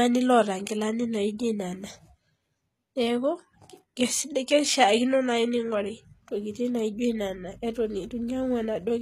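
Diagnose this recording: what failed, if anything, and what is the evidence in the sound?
The treble sounds bright but synthetic across the whole recording: s sounds come out gritty and metallic, with a lispy edge, and nothing remains above about 14.9 kHz. This is plainly audible codec damage, and the likely cause is HE-AAC compression at a very low rate, which fits HE-AAC v2 at around 20 kbps. The codec coded only the lower spectrum and rebuilt the top by copying lower bands upward under a coarse envelope, so the regenerated harmonics never line up with the real ones.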